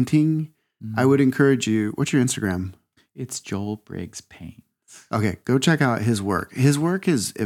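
No technical faults can be heard anywhere here.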